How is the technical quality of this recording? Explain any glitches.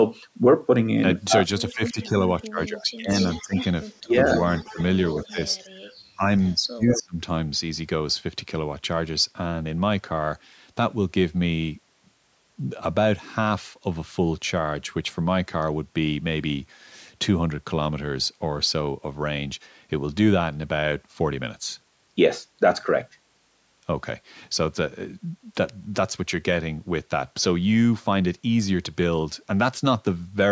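The recording is marred by echo-canceller trouble in its first seven seconds, with three kinds of fault, two of them overlapping. Above that, the audio extends to 8 kHz, consistent with normal call microphone processing.

Speech suppressed in double talk occurs from 1.73 to 4.16 s, briefly at 4.73 to 4.78 s and 5.31 to 5.38 s, and again from 6.16 to 7.2 s. The voice dips in pieces, about a second in total in the first stretch and roughly 0.7 s in the last. The drops reach about 25 dB and then about 35 dB, while the two short dips are shallower. The likely cause is both ends talking at once, so that the canceller could not tell the local voice from loudspeaker echo and turned everything down. Unlike background gating, it is the speech itself that dips.

Echo leak runs from 1.86 to 5.56 s and again from 6.89 to 7.03 s. A delayed copy of the voice trails behind it, about 234 ms late in the long stretch and 188 ms late in the short one. 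It sits about 10 dB and about 5 dB below the speech. The likely cause is a loudspeaker end whose echo canceller let part of its microphone pickup through. It differs from reverberation in that the copy is a discrete, distinctly delayed repeat rather than a smooth decay.

Background gated by the echo canceller occurs from 5.66 to 5.86 s. The room tone drops by about 11 dB for roughly 0.2 s, then returns once the canceller releases its hold on the microphone during loudspeaker playback. What separates this from the double-talk dips is that the ambient bed, not the speech, is what briefly falls away, leaving a momentary hole in the background.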